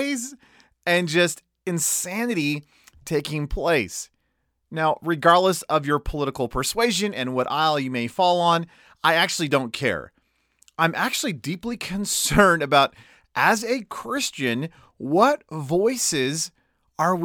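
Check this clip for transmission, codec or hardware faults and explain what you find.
Nothing in the signal points to a transmission, codec or hardware fault anywhere across the speech recording.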